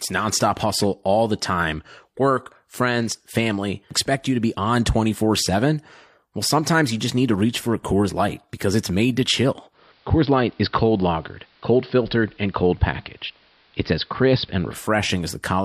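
At 9.71 s, just after "it's made to chill", the receiver loses its digital stream and blends to the AM analogue broadcast over 130 ms. The speech dulls, faint hiss appears well below it, and the level shifts about 1 dB until 14.80 s.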